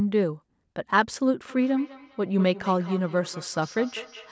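From 1.49 s to 4.31 s, a feedback echo between two devices appears: a second device in the room plays the call back into the microphone, where no echo canceller removes it. The speech returns about every fifth of a second, peaking about 17 dB below the direct sound.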